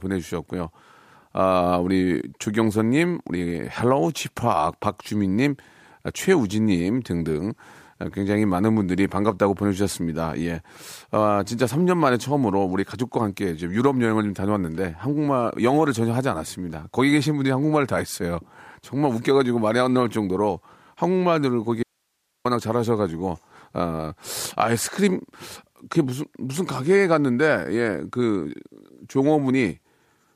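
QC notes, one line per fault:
21.83–22.45 s: audio dropout to a faint residue. Speech cuts abruptly for 0.62 s, leaving only hiss about 50 dB down. Likely the signal was lost while the following path stayed live.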